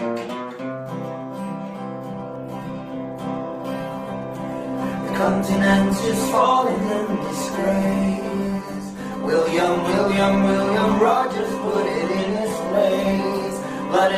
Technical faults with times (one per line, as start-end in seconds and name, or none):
2.12-14.18 adaptive stream at a lower bitrate